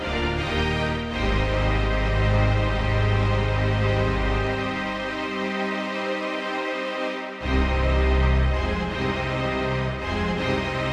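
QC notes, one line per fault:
No technical faults are audible anywhere in the signal.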